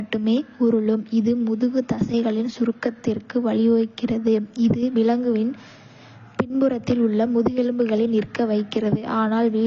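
Audio that was likely squeezed through AAC compression at a low bitrate, in keeping with AAC-LC at around 24 kbps, from start to finish. With so few bits per frame, the encoder lowers its high-frequency cut-off and quantises the spectrum coarsely, leaving gaps. The speech comes out plainly dull and smeared, with a fizzy, warbling texture on sibilants and held sounds that persists throughout the recording.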